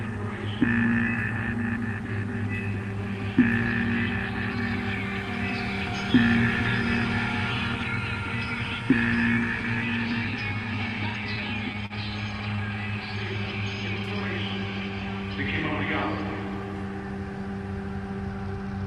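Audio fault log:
11.86–11.93 s and 12.56–12.61 s, short stall from a late packet: twice in under a second, a packet turned up late and the jitter buffer ran dry. The receiver held the last bit of sound for about 39 ms the first time and about 19 ms the second, then picked up right where it left off, so nothing is lost. You just hear a slight drag or smear, with a hint of buzz, over a call path whose top end stops around 12 kHz.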